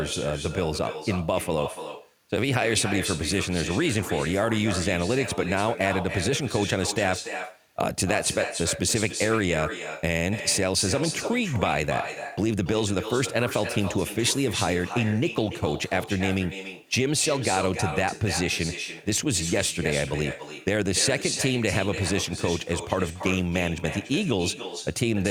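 With no echo canceller on the far end, its loudspeaker output leaks into its microphone, so this speech returns throughout, roughly a third of a second late, about 9 dB quieter and thinner.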